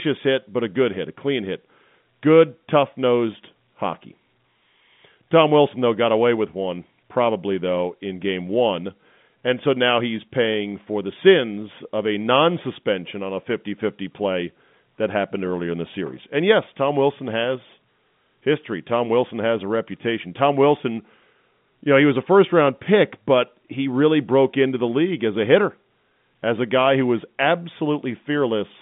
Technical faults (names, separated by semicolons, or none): none